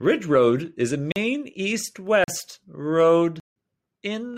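At 1.12 s and 2.24 s, 40 ms blocks of digital silence leave short holes in the speech; at 3.4 s a 160 ms block leaves an audible hole. Each time, the sound cuts out and back without fading. The waveform is flat, and the spectrogram shows blank columns bordered by broadband vertical lines.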